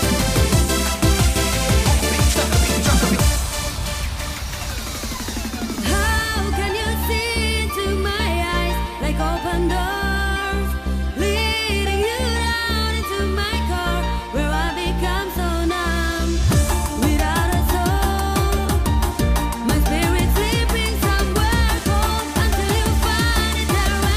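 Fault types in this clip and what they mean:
No technical faults are audible.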